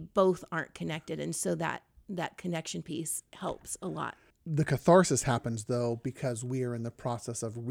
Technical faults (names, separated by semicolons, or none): none